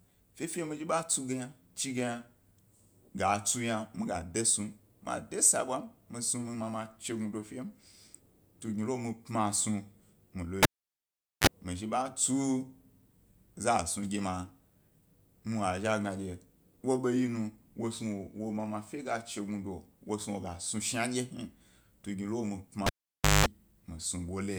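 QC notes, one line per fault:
10.63–11.47 s, cable pulled and plugged in: pop, about 0.79 s of near silence, a short 32 ms burst of 50 Hz buzz as the tip touches, pop again before "mi zhi ḃa".
22.86–23.46 s, cable pulled and plugged in: same thing, about 0.54 s dropout, longer 0.2 s of 50 Hz mains buzz while the plug seats, then the pop back in.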